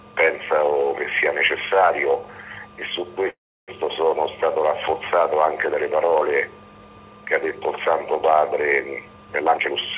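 At 3.30 s packets were likely held up in transit and the jitter buffer ran empty, causing a call audio freeze: the last sound smears into a fading buzz, then 0.32 s of silence until 3.70 s, when the audio resumes where it stopped with nothing missing.

From 9.41 to 9.87 s the jitter buffer, holding more audio than its target, cut out about a fifth of a second in short pitch-period pieces. This jitter buffer speed-up plays that stretch at 146% speed with unchanged pitch, so it sounds hurried, all within the G.711 A-law call band that stops at 4 kHz.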